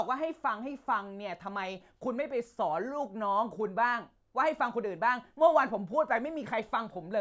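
No technical faults can be heard at any point in the speech.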